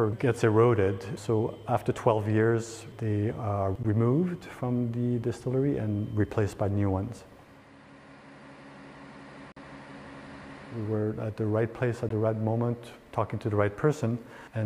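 Brief silent gaps at 3.83 s, 9.52 to 9.57 s and 12.09 s, likely Bluetooth dropouts from packets arriving late; sound resumes skipped ahead.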